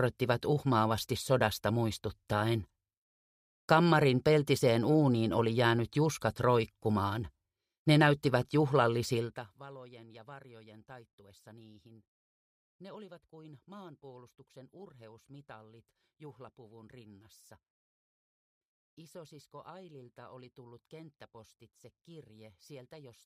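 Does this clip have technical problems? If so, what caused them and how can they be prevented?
No, the signal is technically sound, with its level moving gradually like a fader rather than in any abrupt jump, so there is nothing here that needs preventing.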